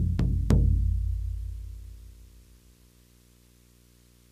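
From start to finish a video or display buzz sits under the sound: a screen or video cable is coupling its picture timing into the audio path. The field rate produces a harsh buzz at 59.94 Hz, roughly 30 dB below the signal, with gritty hash above it, plus a whine at the 15.7 kHz line rate. A spectrogram shows a dense comb of harmonics spaced at 59.94 Hz and a thin, unbroken line at 15.7 kHz.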